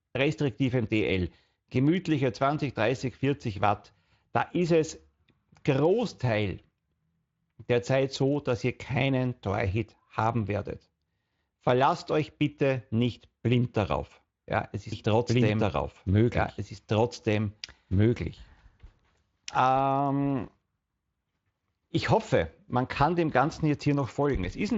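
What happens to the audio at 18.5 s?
At 18.5 s you're inside a doubled audio track, running from about 14.92 s to 20.44 s. A second copy of the speech sits roughly two seconds behind the original at about the same level, so the two overlap and talk over each other. The copy has no reverb tail or room colour, and it starts and stops abruptly. That points most likely to the audio being captured twice through a slower path.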